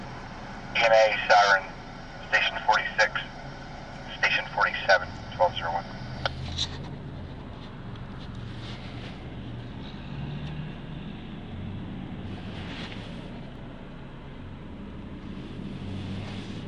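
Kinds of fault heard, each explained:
Repeated buffer: at 13.56 s a 2.9 ms slice of audio, consistent with a 128-sample buffer, plays twice with a hard join, producing a brief click.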